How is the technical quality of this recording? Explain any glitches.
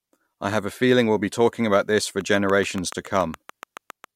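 The recording has one glitch. From 2.21 to 4.05 s a train of clicks ticks about seven times per second at a steady pace, roughly fifteen clicks peaking about 5 dB above the speech, likely from interference. Their matching shape and regular timing set them apart from random crackle.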